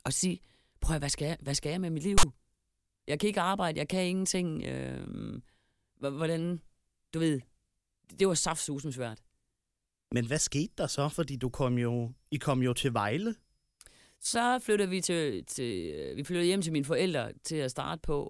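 At 2.18 s, for about 50 ms until 2.23 s, file tags played as audio break into the speech: text metadata is decoded as samples, producing a loud, hard-edged rasp. The waveform shows an abrupt block shifted to one side of zero, and the spectrogram shows a sharp broadband vertical stripe.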